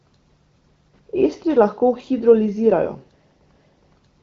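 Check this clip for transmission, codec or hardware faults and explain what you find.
Nothing here to worry about, as the speech just has the familiar sound of an AMR wideband (HD Voice) call, with content easing off around 7.5 kHz and a texture that fits a rate of roughly 15.85 kbit/s.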